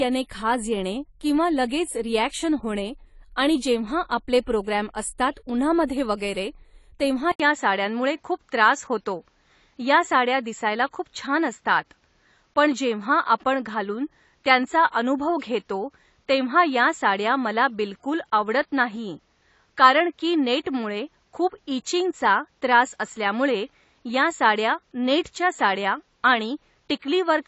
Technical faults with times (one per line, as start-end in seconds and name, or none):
0.00-27.48 AAC compression
7.32-27.48 input switched to a poorer device